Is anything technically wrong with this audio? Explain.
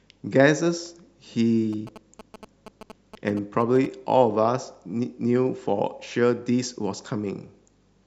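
Yes. From 1.73 to 3.86 s, GSM signalling bursts break through the speech: a galloping dit-dit-dit of short 217 Hz buzzes, roughly 15 dB below the speech. This points to a nearby 2G phone signalling, its radio bursts rectified by the audio circuitry.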